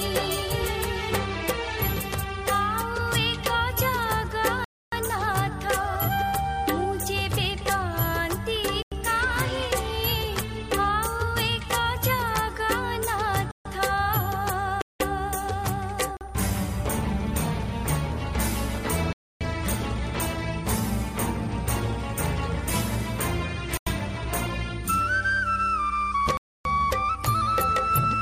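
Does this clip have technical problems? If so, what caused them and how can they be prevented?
Yes. Blocks of digital silence cut the audio at 4.64, 8.82, 13.51, 14.82, 16.17, 19.13, 23.77 and 26.37 s, lasting from 40 ms to 280 ms. The sound drops to silence and returns with no fade. A muting or fading fault would ramp instead. The gap lengths, two 93 ms and one 186 ms, fit whole buffers of 4096 and 8192 samples that the program failed to fill in time. Giving the audio thread higher priority and larger buffers would prevent it.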